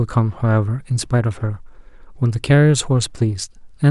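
A short speech recording with nothing technically wrong that can be heard.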